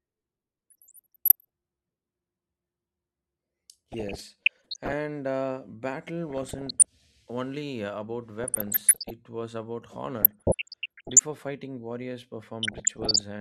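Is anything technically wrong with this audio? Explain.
Yes. The speech has DAB burbling in six bursts: 0.70 to 1.45 s, 3.92 to 4.93 s, 6.30 to 6.85 s, 8.44 to 9.10 s, 10.21 to 11.22 s, and 12.63 to 13.21 s. Weak reception lets bit errors, around one percent, slip past error correction into the MP2 data. Corrupted samples put short blips of noise in single sub-bands, and corrupted scale factors make sub-bands jump in level for up to a frame. The result is burbling noise over the speech.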